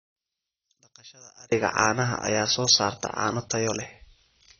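From 0 to 1.52 s the speech almost vanishes in mono, about 27 dB down, leaving a faint residue rather than silence, so one channel inverted is likely, not a dropout. Throughout, AAC compression likely explains the dull, smeared sound with nothing above 6.6 kHz. The warbling, fizzy sibilants set it apart from simple low-pass filtering and point to a bitrate near 27 kbps.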